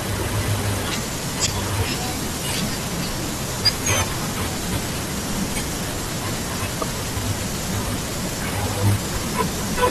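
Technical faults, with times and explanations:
1.43–1.48 s and 6.78–6.83 s, damaged data in a compressed stream: two brief glitches of about 50 ms break into the speech. Corrupted bytes in the coded stream made the decoder misread those frames and lose sync until it found the next valid frame header.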